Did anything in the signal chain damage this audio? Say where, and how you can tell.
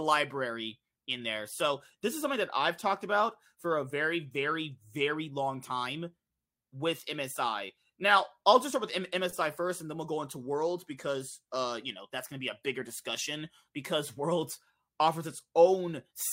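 No, nothing in the chain audibly damaged this speech.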